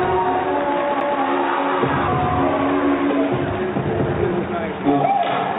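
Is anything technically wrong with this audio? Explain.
Yes, there is a CD skip at 1.00 s. A knock or a flaw on the disc threw the laser onto another turn of the spiral track, so the player muted for a moment and resumed reading from a different point. In the audio, this is a tick with a very brief silence of a few milliseconds, followed by an abrupt discontinuity where the sound jumps to another place. The band-limited character, with nothing above 4 kHz, comes from the call path and fits G.711 mu-law coding.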